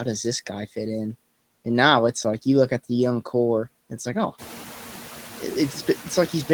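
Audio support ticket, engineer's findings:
Noise suppressor artifacts throughout. Background pumps, dipping between words and swelling under them. Suppressor cuts noise-classified bands by about 4 dB, frame by frame. Room noise rises about 14 dB around 4.5 s, then sits about 18 dB under speech.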